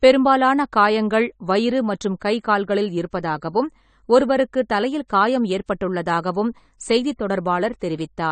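From start to finish the speech sounds dull and smeared. Nothing is present above 9 kHz, so consonants lose their edge. Sibilants have a fizzy, warbling texture, and sustained sounds waver. The damage is plainly audible. The likely cause is AAC compression, with an AAC-LC encoder working at a low bitrate, which fits something near 32 kbps. Short of bits, it lowers its cut-off and quantises the remaining bands coarsely. That leaves gaps that shift from frame to frame.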